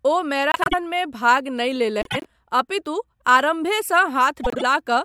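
Speech with frames out of order at 0.52 to 0.74 s, 2.01 to 2.26 s and 4.43 to 4.63 s. Neighbouring blocks of about 96 ms, then 72 ms, play swapped. Each stretch flutters. No time is lost.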